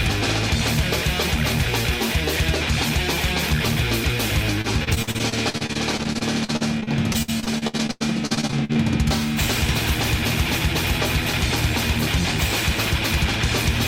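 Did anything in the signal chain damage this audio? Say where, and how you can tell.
Yes. From 4.61 to 8.77 s the sound turns choppy and robotic, broken by dozens of short holes. Each is bridged by continuing what came just before, and the longest runs about 91 ms. This is repeated packet loss at the network stage. Packets kept arriving late or not at all, and the receiver's concealment stretched the last good audio into each gap. About a quarter of that stretch, roughly one second, is patched rather than real.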